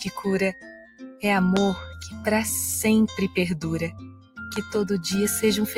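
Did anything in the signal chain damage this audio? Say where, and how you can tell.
Yes. Noise suppressor applied to music or sounds, throughout: a speech-oriented suppressor in the call-processing stage keeps mistaking steady tones, ambience and tails for noise. Its gain swings by around 10 dB, so sustained material pumps and thins while attacks pass.

Sound cut by the noise suppressor at 0.52–1.24 s (deepest drop about 16 dB), 2.10–2.26 s (about 8 dB) and 3.91–4.46 s (about 20 dB). In these stretches held sound sinks and decays are truncated because the suppressor classed them as noise and pulled gain harder there.

Loud pop at 1.57–1.59 s, a single sharp pop roughly 20 dB above the sound, and a double pop at 4.56–4.78 s, roughly 15 dB above. The sound continues underneath, which points to a voltage step likely from analogue wiring or a driver glitch.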